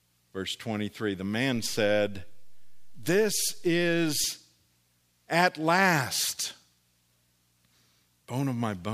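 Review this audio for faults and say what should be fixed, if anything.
A DC step shifts the waveform's zero line at 1.56 s and holds until 4.24 s, an offset of about -37 dBFS, producing a low thump at each edge while the speech continues unchanged. On a waveform the trace sits off-centre between those points, and a spectrogram shows brief low-frequency bursts at both transitions. A DC-blocking high-pass filter at the input, with converter calibration that doesn't recalibrate mid-recording, would prevent it.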